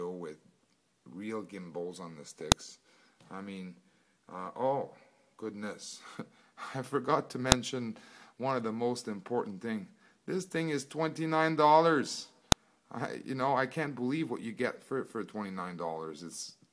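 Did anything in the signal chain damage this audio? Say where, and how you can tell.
Yes: file header played as audio, sharp clicks at 2.52, 7.52 and 12.52 s, every 5 s, where joined pieces kept their headers, which then played as samples.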